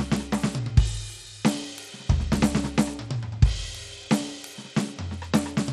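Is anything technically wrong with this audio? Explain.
Yes. Throughout the music, the treble flickers and drops out under a gritty haze, likely Bluetooth SBC compression starved of bits, fitting roughly 96 kbps. A spectrogram shows patchy, blocky upper bands.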